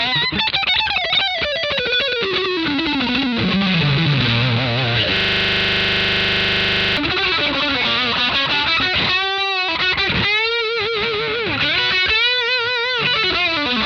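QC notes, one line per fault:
5.17–6.97 s, system hang loop: a single 40 ms slice of sound repeats exactly, about 45 times in a row, before normal audio resumes. The playback system froze, but the sound hardware kept cycling through the same small ring buffer. Because the slice is so short, the repeats fuse into a rough, steady buzz at 25 Hz. That loop length points to a buffer of about 40 ms.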